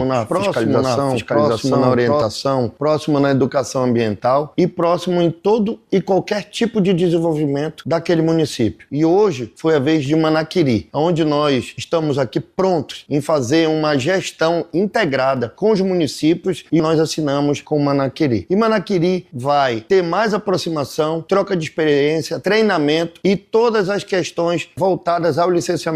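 From the first moment until 2.22 s, a doubled audio track is under way: a second full-band copy, about as loud as the original, trails it by roughly 0.7 s. It is most likely a late second capture path or misaligned edit. Unlike an echo, it has no decay or room colour, and it stops abruptly.

At 9.93 to 9.99 s a corrupt frame was decoded, spanning a few consecutive frames, and a shorter one follows at 12.69 to 12.73 s. The damaged data puts energy at wrong frequencies, heard as a brief chirpy burst peaking near -20 dBFS, then a fainter blip near -30 dBFS. Unlike a dropout or click, these fill the frame with spurious sound rather than silence or a single spike.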